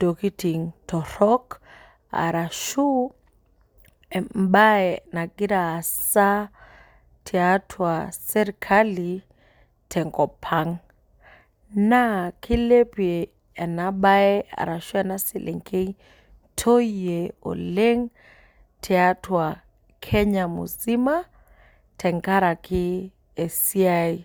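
No technical faults are audible.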